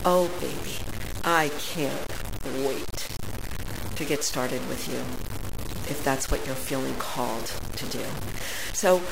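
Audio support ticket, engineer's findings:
Low bit depth without dither, full clip. Likely a requantisation stage truncating to about 5 bits, no dither. Error tracks the speech: grainy, signal-dependent distortion only around 10 dB below the signal; quiet passages turn gritty and sputter between steps.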